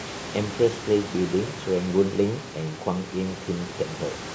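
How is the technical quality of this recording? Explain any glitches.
No technical faults are audible.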